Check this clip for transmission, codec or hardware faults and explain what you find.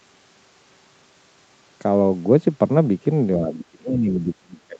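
One fault stands out, near the end of the clip, over a call path whose coding holds the audio below about 8 kHz. From 3.39 s to the end, the speech sinks sharply, by roughly 25 dB at its deepest. The likely cause is speech suppressed in double talk: with both sides talking at once, the echo canceller mistook this talker for loudspeaker echo and turned it down.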